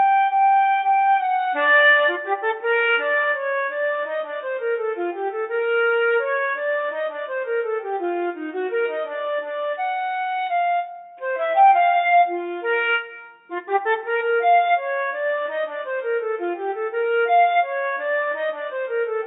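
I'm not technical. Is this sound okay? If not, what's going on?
Yes, nothing stood out as a problem when I listened to it.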